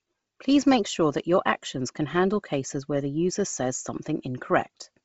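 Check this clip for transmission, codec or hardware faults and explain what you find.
One codec fault runs through the whole speech clip: Bluetooth LC3 compression. From start to finish the audio has a breathy, grainy edge, and nothing is present above about 7.7 kHz. The damage is heavy. The likely cause is LC3, the transform codec of Bluetooth LE Audio, running at a low rate that fits roughly 24 kbps with 7.5 ms frames. At that rate the encoder drops much of the upper spectrum and fills the gaps with synthetic noise, which produces the grainy texture.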